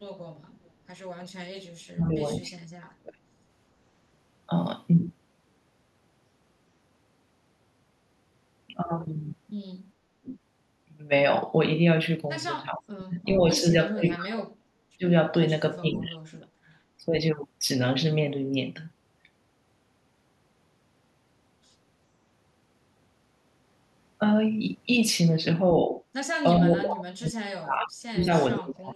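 At 0.64–0.70 s a faint echo leak appears: a copy of earlier sound returns 424 ms late, about 40 dB below the speech. The likely cause is a speakerphone echo canceller letting loudspeaker pickup through. On a spectrogram it shows as a pale repeat of earlier energy.

Speech suppressed in double talk follows at 1.88–3.21, 10.21–10.36, 12.75–15.04, 15.81–16.50, 17.00–17.15 and 26.59–28.95 s. The voice dips by up to about 40 dB, likely because the canceller ducks its own talker along with the loudspeaker echo, leaving gouged gaps in the waveform envelope.

Inside the final dip, at 27.82–27.86 s, the echo returns louder, about 20 dB down, as a brief ghost trace.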